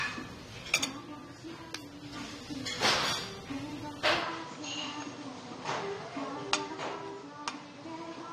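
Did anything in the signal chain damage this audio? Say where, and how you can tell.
Yes. AAC compression, throughout the clip, at the codec stage. Nothing reaches above 16.5 kHz, and the sound has a plainly audible smeared, warbling texture on sustained parts and a fizzy edge on hissy transients. This is most likely AAC-LC at a low bitrate, around 32 kbps. At that rate the encoder lowers its cut-off and starves the quantised frequency lines, leaving spectral holes or noise-filled bands.

Input switched to a poorer device, from 4.22 s to the end, at the capture stage before the codec. At 4.22 s the bandwidth abruptly narrows to nothing above 9.2 kHz, so the sound turns duller and boxier with no gap at the switch and roughly no change in level. A faint new noise floor appears well below the signal. Most likely the system moved to another microphone or a headset call profile mid-recording.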